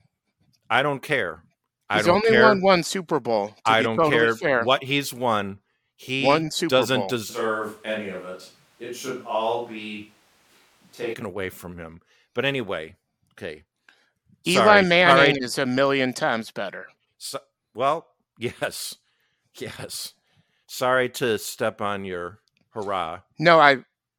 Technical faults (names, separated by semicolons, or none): switch to a distant microphone